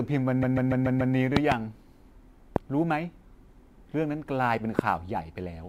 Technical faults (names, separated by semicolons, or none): sample clock jitter; repeated frames; loud pop